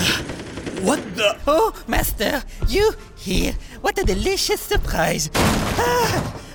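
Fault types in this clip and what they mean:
No technical faults can be heard in this audio; the signal stays steady and intact throughout.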